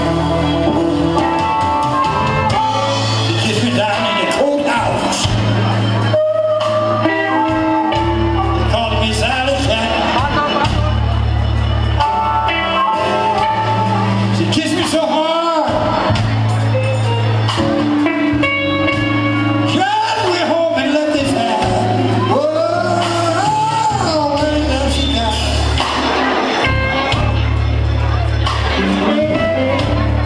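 Nothing technically wrong turns up in this audio; it all sounds just as it should from beginning to end.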